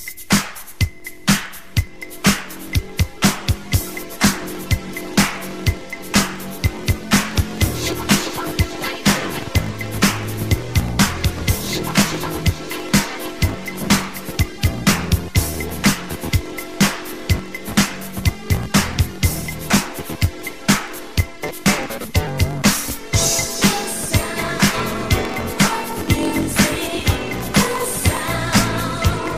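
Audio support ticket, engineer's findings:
Block size mismatch (truncated), whole clip: buzz near 46 Hz, audio about 1.07x fast at normal pitch. Block tails dropped, fits 1024-sample writes. Spectrogram shows evenly spaced vertical striations; waveform shows regular jumps.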